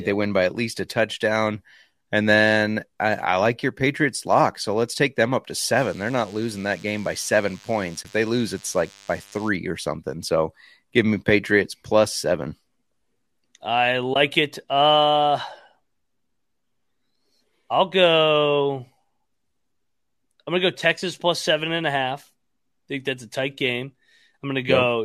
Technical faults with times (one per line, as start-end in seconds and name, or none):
5.76-9.49 DECT cordless phone buzz
8.03-8.05 AAC frame loss with muting
14.14-14.16 AAC frame loss with muting